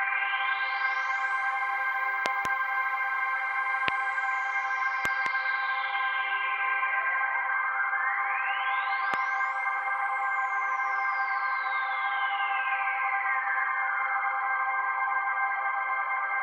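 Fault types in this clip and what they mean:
Loud pop: four sharp pops, two of them quick doubles, jump about 20 to 25 dB above the sound, which continues beneath. They are likely voltage pulses from a plug, switch or static. Each shows as a tall waveform spike and a thin full-height spectrogram stripe.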